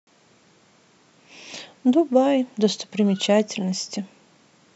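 A speech recording with no technical faults to report. No event in it calls for a time or a cause.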